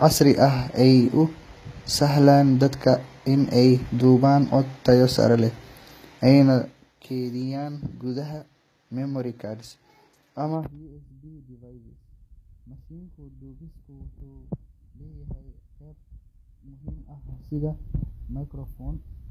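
Codec damage is plainly audible throughout the speech, and nothing remains above 14.9 kHz. The likely cause is HE-AAC compression at a rate that fits about 20 kbps. Its treble is rebuilt by copying lower bands upward, so upper harmonics do not match the original.

From 17.09 to 17.59 s there is zipper noise. The level moves by roughly 15 dB in unsmoothed steps, about a hundred per second. Each step adds a small click. Together they form a ticking buzz over the speech.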